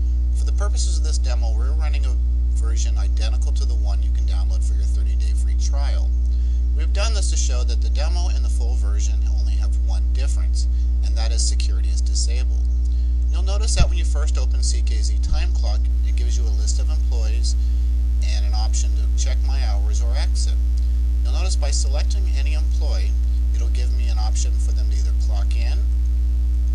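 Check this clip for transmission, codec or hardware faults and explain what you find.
One hardware fault is present: mains buzz, running from 15.9 s to the end of the clip. From that point a steady, raspy buzz sits under the sound, roughly 35 dB below it. The fundamental is 50 Hz, but the rasp comes from its harmonics extending up to several kHz. Switching spikes from a dimmer, rectifier or poorly shielded cable, arriving twice per mains cycle, cause those harmonics, and they give the buzz its edge rather than a smooth hum.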